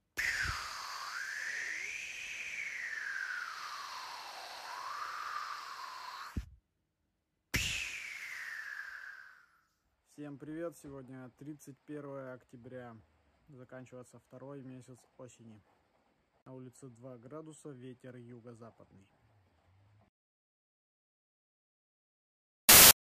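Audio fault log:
22.69 to 22.91 s, file tags played as audio: right near the end you get a hard-edged burst of very loud white noise, about a fifth of a second long. That's an embedded cover picture being read as samples, and compressed image data comes out as dense, random-sounding static.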